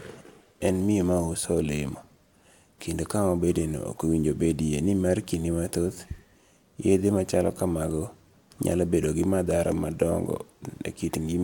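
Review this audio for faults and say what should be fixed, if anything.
Nothing stood out on listening, so there is nothing here that needs fixing.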